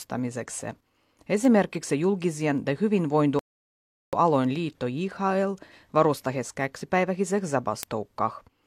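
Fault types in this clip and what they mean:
Word clock ticks: The receiving device runs on its own clock rather than locking to the sender's, so a single sample slips each time the two clocks drift past one another. Sharp ticks of uneven strength occur about every half second, roughly 15 in all, from 0.32 to 8.4 s. This suggests a clock mismatch of around 40 ppm.
Rebuffering stall: The player ran out of buffered audio and waited for more data. At 3.39 s the speech cuts to silence, then resumes at 4.13 s exactly where it stopped. Nothing is lost, but the pause adds about 0.74 s to the clip.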